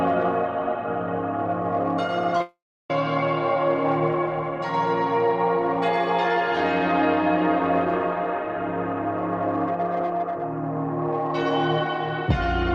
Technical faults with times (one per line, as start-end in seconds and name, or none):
2.37-2.41 short concealed packet loss
2.42-2.90 long network dropout